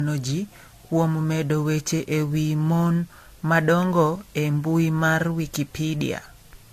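Generation loss runs throughout the speech. It sounds swirly, smeared and hollow, with blurred attacks and nothing above 14 kHz. The likely cause is around four lossy re-encodes, fitting AAC-LC near 64 kbit/s. Each pass quantised afresh, piling up noise and spectral holes.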